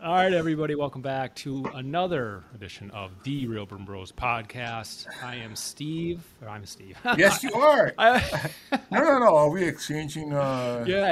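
From 2.35 to 4.52 s, and from 9.46 to 11.03 s, the sound runs 6% slow and sits 107 cents flat. Then it snaps back. This is likely a drift correction step.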